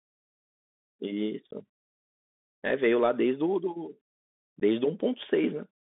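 Bluetooth CVSD headset codec, throughout: the one-bit delta coding confines the speech to about 200 Hz to 3.5 kHz, leaving plainly audible granular hiss, scratchy sibilants and distortion on loud high sounds.

Unconcealed Bluetooth headset packet loss, at 1.51 to 1.53 s and at 4.60 s: a couple of voice packets drop each time, punching abrupt 15 ms holes before the sound resumes.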